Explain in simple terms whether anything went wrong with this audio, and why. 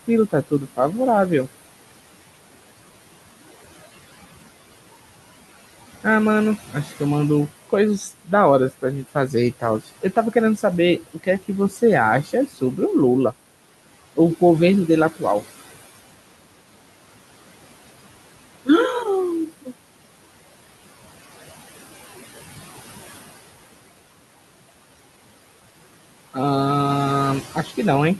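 Two things went wrong, both caused by the noise suppressor on the call.

First, there are noise suppressor artifacts through the whole clip. The suppressor tries to strip out the steady noise of the room. It works frame by frame, pushing the background down hard whenever it thinks nobody is talking. So the room noise drops away in the gaps and comes back under the speech. What remains can flutter or warble, and the voice can sound a bit thin or watery.

Second, there is speech cut by the noise suppressor. At a few moments the suppressor mistook parts of the speech for noise and turned them down with the background. This happens from 0.08 to 0.79 s, 6.67 to 7.01 s, 8.71 to 10.64 s, 11.01 to 11.8 s, 12.23 to 12.78 s and 27.55 to 27.78 s. Only short pieces inside each stretch are hit, mostly around a tenth to a few tenths of a second. The 8.71 to 10.64 s stretch loses the most. There, the affected bits of speech sound swallowed or faint.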